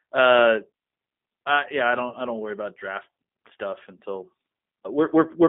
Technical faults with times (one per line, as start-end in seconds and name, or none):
0.00-5.49 G.729 codec
2.09-2.16 VoIP packet loss concealed by the speech codec